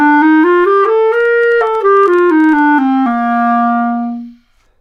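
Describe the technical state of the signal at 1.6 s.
At 1.6 s the signal sits inside a train of clicks running from 1.21 to 2.60 s: some twenty ticks at about 13 per second, unevenly spaced, peaking near the level of the sound itself, likely from electrical interference or a faulty connection or power supply. Their matching shape separates them from random crackle.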